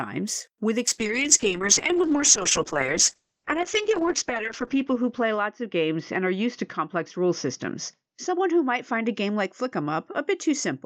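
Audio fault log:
0.89–10.85 s, call bitrate drop: the encoder's starved of bits, so the sound turns rough and muffled, with nothing above 8 kHz, consistent with around 7 kbps, worst for 3.35 s.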